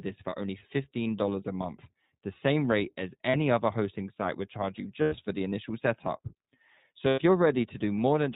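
Speech throughout sounds muffled and slightly rough and synthetic, with nothing above 4 kHz, the narrowband mark of the iLBC codec, which fits its 15.2 kbps mode with 20 ms frames. Brief held, buzzy vowel-like smears appear at 0.30 s (20 ms), at 3.30 s after "rate as" (40 ms), at 5.02 s after "site would charge you" (100 ms) and at 7.08 s (100 ms). These are lost iLBC frames: the decoder fills each gap by repeating the last pitch cycle mixed with noise, and the voice returns to normal almost immediately afterwards.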